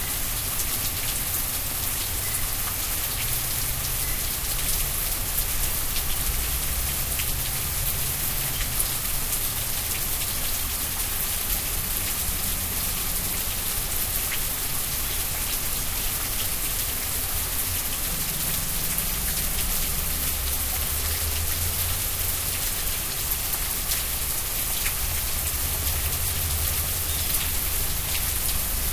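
Nothing stood out as a technical fault anywhere in this recording of everyday sounds.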